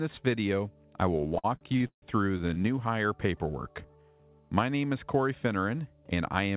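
From 1.18 to 2.66 s the sound catches and drags in a rapid string of small hitches: fifteen brief holds, the longest about 153 ms, adding up to roughly 460 ms, almost a third of that stretch. These are repeated stalls (stutter). Packets kept arriving late, the jitter buffer ran dry again and again, and each time the receiver stretched the last sound, fading it during the longer waits. Nothing is lost; the audio just lurches forward.

Between 3.68 and 4.03 s the sound slows to about 82% speed without any change in pitch, so it comes out drawn out over roughly 71 ms of added length. This is a jitter buffer slow-down. With its reserve running low, the receiver repeated single pitch periods or bits of pauses to rebuild a cushion, stretching time rather than stopping. Throughout, the band ends at 4 kHz, which fits the G.711 mu-law call path.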